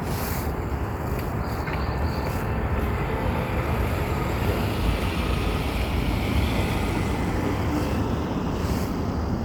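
No audible technical faults.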